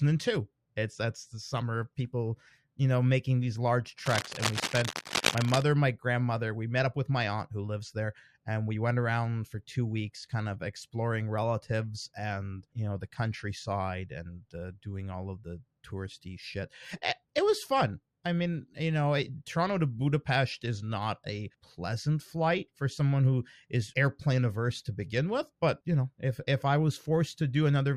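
Right after "know making these large", from about 4.06 to 5.62 s, there's cable scratch noise: a dense, ragged rustling sitting only a little below the speech, until "my grandmother". It's likely a worn lead or connector being moved, its contact resistance jumping around.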